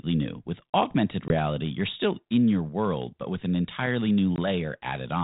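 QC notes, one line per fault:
1.28–1.35 s and 4.36–4.39 s, packet loss on an ADPCM call: a hard 20 ms hole, roughly one packet, then slightly distorted speech while the 32 kbit/s G.726 decoder's predictor resyncs.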